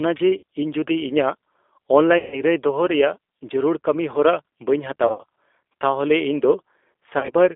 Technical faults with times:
0.00-7.56 G.729 codec
0.37-0.43 VoIP packet loss concealed by the speech codec
2.18-2.42 VoIP packet loss concealed by the speech codec
5.07-5.24 VoIP packet loss concealed by the speech codec
7.19-7.34 VoIP packet loss concealed by the speech codec

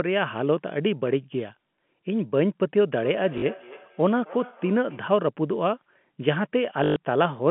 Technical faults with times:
3.00-5.17 feedback echo between two devices
3.38-3.42 packet loss with last packet repeated
6.84-6.96 packet loss with last packet repeated

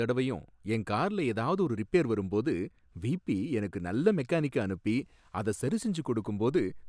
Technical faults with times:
none

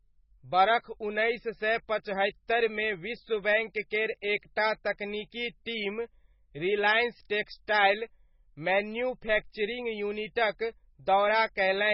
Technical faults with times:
0.00-11.94 MP3 compression
7.45-7.68 pre-echo

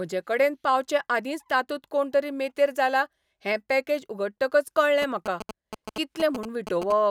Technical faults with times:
5.02-6.92 GSM signalling bursts

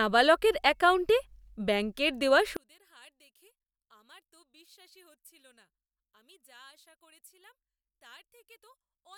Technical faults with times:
2.57-9.17 one channel inverted

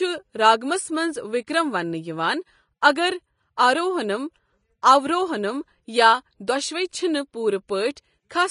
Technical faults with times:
0.00-8.50 Vorbis compression

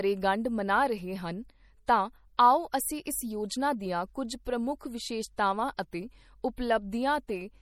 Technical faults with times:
0.00-7.62 MP3 compression

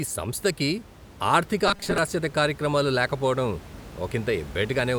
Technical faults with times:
1.68-1.98 robotic sound from repeated short buffers

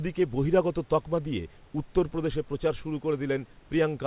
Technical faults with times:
none

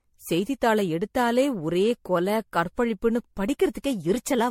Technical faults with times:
0.00-4.50 generation loss

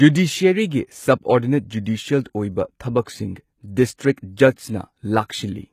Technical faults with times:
0.00-5.72 HE-AAC compression
3.05 pre-echo

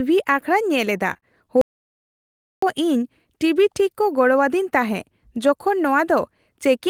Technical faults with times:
1.13-1.24 short concealed packet loss
1.61-2.62 audio dropout to silence

